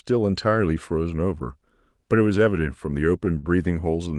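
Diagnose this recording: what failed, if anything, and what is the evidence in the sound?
Network and jitter buffer: a short stall from a late packet at 3.38 to 3.46 s. The buffer ran dry, so about 42 ms got stretched, then the speech resumed intact.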